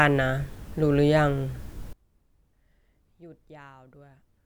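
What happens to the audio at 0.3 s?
Nothing goes wrong at 0.3 s: the speech plays through that moment intact, with no dropout, click, distortion or other fault.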